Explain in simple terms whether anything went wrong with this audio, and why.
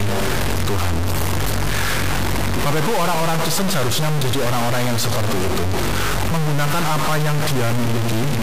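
Something went wrong for the whole clip. A harsh, buzzy distortion runs under the speech from start to finish, and the pauses fill with a fairly loud hiss. That points to a stuck bit, likely from a faulty cable or converter, which knocks many sample values off by one large, fixed amount.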